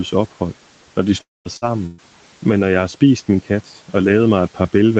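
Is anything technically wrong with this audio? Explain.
Yes, there are three dropouts in this speech, all between about 1.2 and 2.0 seconds.

From 1.21 to 1.48 s there is what sounds like a long network dropout, likely a stretch of packets that never arrived. The receiver extends the last sound into a fading buzz or hiss, then leaves about 190 ms of near-silence, and the speech resumes with roughly 240 ms gone. The silent hole is what distinguishes it from the shorter losses that follow.

Two bursts of packet loss follow, at 1.57 to 1.65 s (about 60 ms missing) and 1.86 to 2.01 s (about 120 ms missing). In each, the concealment holds the preceding sound as a decaying buzz or hiss, in the second it never falls silent, and the speech then jumps ahead past the missing part.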